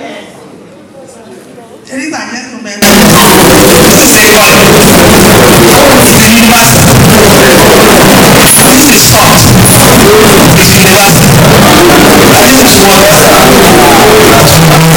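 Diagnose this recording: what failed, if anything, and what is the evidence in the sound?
From 2.82 s to the end the audio turns into loud, harsh distortion, and the quiet stretches come through as loud as everything else. That points to a sample-format conversion fault, likely signed and unsigned mixed up on 16-bit samples, with the flipped top bit turning every zero crossing into a full-range jump.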